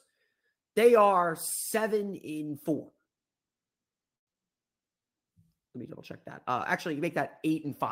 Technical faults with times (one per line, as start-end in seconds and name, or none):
4.15-4.37 long network dropout
4.81-5.10 jitter buffer slow-down